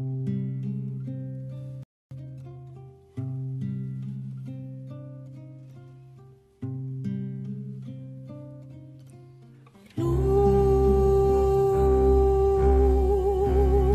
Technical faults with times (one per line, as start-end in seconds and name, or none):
1.83-2.11 playback stall
2.11-2.65 time-compressed catch-up